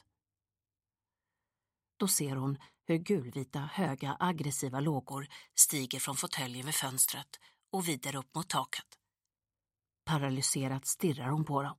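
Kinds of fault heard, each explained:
Pre-emphasis left on: from 5.09 to 9.30 s the sound turns thin, bright and hissy, with the top end about 11 dB stronger at 10 kHz than at 1 kHz, because a treble boost applied before recording or transmission was never undone by its matching cut.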